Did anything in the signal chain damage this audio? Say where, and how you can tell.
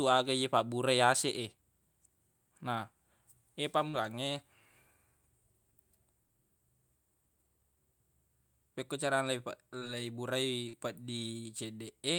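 Yes, the network leg: four bits of short concealed packet loss at 3.89, 6.27, 9.79 and 10.69 s. Each gap, 20 to 40 ms, gets papered over by the receiver stretching the last sound forward, so you hear a quick smear or wobble before the real speech blends back in.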